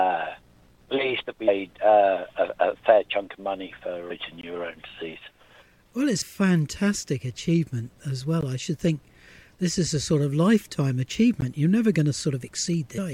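At 1.47 s, 6.21 s and 12.97 s, damaged data in the compressed stream throws the decoder out of sync, so it hunts for the next frame and leaves a short glitch. Between these, there is a block of digital silence: 20 ms from 4.41 to 4.43 s, about 15 ms at 8.41 s and 14 ms at 11.41 s, the longest a short hole, the shorter two closer to a tick or dip.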